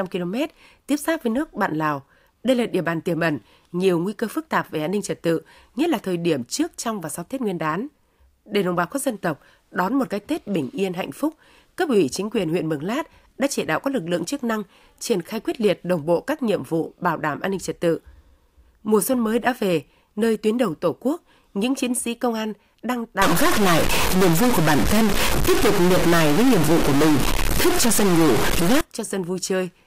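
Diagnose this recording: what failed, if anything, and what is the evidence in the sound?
From 23.22 s to 28.81 s, right after "sĩ công an đang", the speech turns harsh and buzzy, and the gaps between phrases fill with a coarse hiss instead of falling quiet. The pattern points to a stuck bit, likely a data line or converter bit held at one state. Roughly half the samples are pushed off by a step of around -15 dBFS, a fairly high bit, and the error flips with the sign of small values, which is why even pauses turn noisy.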